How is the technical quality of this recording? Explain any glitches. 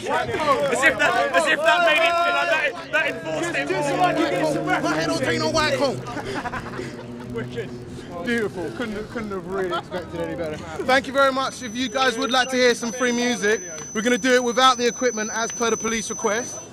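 The recording has three technical problems: a constant block-rate buzz, a high whistle in the last few seconds, and a single digital tick.

Filter restarted on every block, throughout: a processing filter appears to lose its memory at each block boundary and start again from silence. Each restart leaves a small transient, and those transients repeat at 50 Hz, which fits blocks about 20 ms long. The result is a low buzz that rises and falls with the level of the sound, louder in busy passages and nearly gone in quiet ones.

Feedback whistle, from 11.36 s to the end: a thin, steady tone at 6 kHz sits behind the sound, swelling and fading slowly in level and staying roughly 15 dB below it. This is likely a loudspeaker-to-microphone loop held just at the edge of feedback. One frequency keeps ringing at a low level without growing into a howl, so it persists as a faint whistle.

Bit error spike at 12.34 s: a single sample jumps sharply and immediately returns, most plausibly from one flipped bit in memory or on a digital link, which shifts the value by a power of two. 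It is heard as one crisp, broadband tick that has nothing to do with the surrounding sound. It falls within the whistle section, but it is distinct from both the whistle and the buzz.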